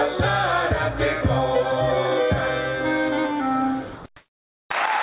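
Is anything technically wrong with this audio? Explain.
Yes. Three faults cluster near the end, all likely tied to a voice detector cutting transmission on what sounds like a call link whose bandwidth stops around 4 kHz, which fits a narrowband telephone codec.

From 3.96 to 4.04 s, sound is dropped by the voice detector: the sender judged real sound to be background and stopped sending, so about 70 ms of it vanishes and a stretch of steady hiss fills the gap before the audio returns.

From 4.16 to 4.70 s, comfort noise replaces the background. With transmission paused, the receiver synthesises a flat, featureless noise roughly matching the room, about 3 dB quieter than the real background, which sits about 38 dB below the loudest sound, and its detail disappears.

At 4.69 s there is an onset clipped by the voice detector: the detector reacted late when sound resumed, so about 20 ms of the start was never sent, and the sound begins abruptly without its natural soft attack.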